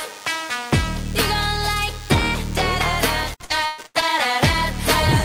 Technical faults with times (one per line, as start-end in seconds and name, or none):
0.00-5.25 DECT cordless phone buzz
3.23-4.04 repeated packet loss (robotic sound)